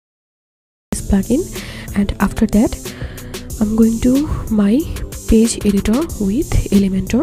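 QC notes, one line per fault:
0.00–0.93 s, cut-off start: capture began late, so silence gives way at 0.93 s to sound already in progress, with no natural attack or fade-in. The waveform shows a flat line jumping straight to ongoing signal, and the spectrogram shows a blank stretch ending in a sharp vertical edge.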